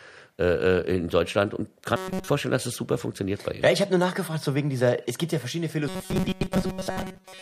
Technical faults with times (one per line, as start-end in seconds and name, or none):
1.96-2.29 robotic sound from repeated short buffers
5.88-7.42 robotic sound from repeated short buffers